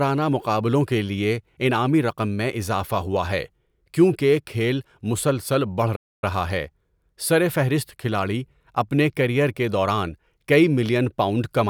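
Speech, with a playback stall right after "کیونکہ کھیل مسلسل بڑھ": from 5.95 to 6.24 s the sound drops out for 0.27 s, showing as a flat waveform and a blank vertical band on the spectrogram. The likely cause is a player that ran short of data or had its thread blocked.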